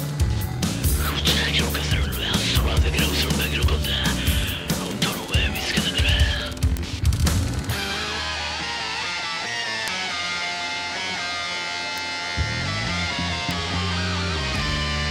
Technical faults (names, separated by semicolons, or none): bit error spike